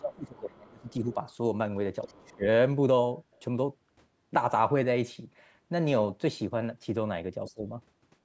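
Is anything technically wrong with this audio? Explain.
Yes, there are two problems, both tied to the call's echo handling, with the band topping out at 8 kHz from normal call processing.

Speech suppressed in double talk, at 0.0–1.17 s, 2.06–2.45 s and 7.54–7.66 s: the speech dips by around 20 dB, likely because the echo canceller ducked everything during overlapping talk.

The other side's voice is leaking through in faint scraps at 0.88–0.93 s, 2.02–2.11 s and 3.33–3.4 s, well below the speech. It's likely loudspeaker echo the canceller didn't fully remove.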